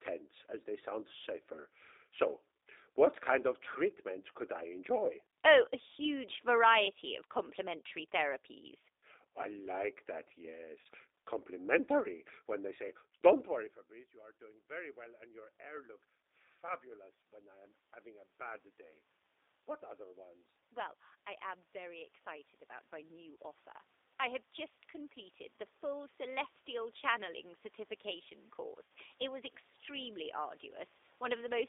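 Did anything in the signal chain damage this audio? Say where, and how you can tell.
Yes. At the codec stage, the whole clip carries G.729 codec damage. The band stops at about 300 Hz and 3.7 kHz, and the sound is rough and a bit synthetic throughout. That fits an 8 kbit/s coder rebuilding speech from a filter, a pitch predictor and a few pulses per frame.

On the network side, there's VoIP packet loss concealed by the speech codec at 10.81–10.87 s (right after "therapies I like that"), 23.35–23.37 s and 28.84–28.90 s. The gaps run about 40, 20 and 60 ms, which fits two, one and three lost packets. You hear fading extrapolation where the decoder guessed from its last frames.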